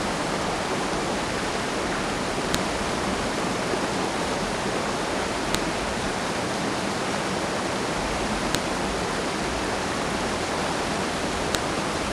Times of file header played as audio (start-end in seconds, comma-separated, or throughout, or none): 2.54, 5.55, 8.55, 11.55